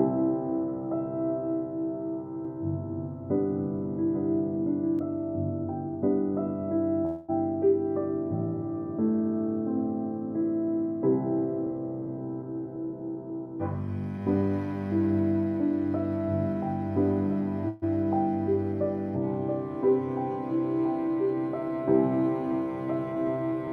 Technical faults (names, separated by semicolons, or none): doubled audio track; call audio freeze; jitter buffer speed-up